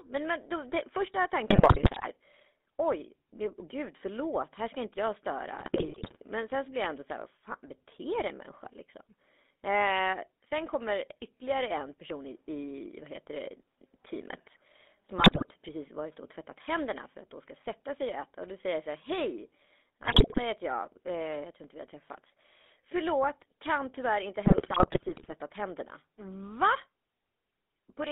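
A buzzy, gravelly roughness runs through the whole speech recording, confined to a narrow band from about 250 Hz to 3.6 kHz. That is the GSM full-rate codec, which rebuilds the voice from a vocal-tract model excited by sparse, regular pulses, which fits its 13 kbps rate. Squawks, pops and gargling bursts break the voice at 1.5–2.07 s, 5.6–6.17 s, 15.18–15.45 s, 20.02–20.39 s and 24.46–25.33 s. These are GSM bit errors: corrupted filter, pitch or gain values reaching the decoder distort the spectrum or spike the level frame by frame.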